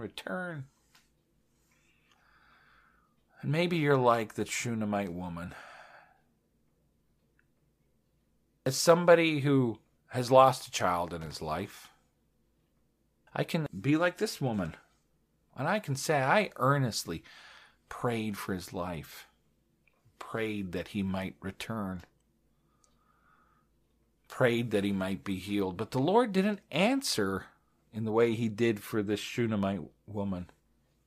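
Speech, with a loose connector crackle from 11.21 to 11.36 s, just after "lost a child in". A worn or dirty contact making and breaking chops the signal into an irregular scratchy burst. On a waveform it shows as a cluster of jagged spikes and dropouts, and on a spectrogram as ragged broadband vertical streaks.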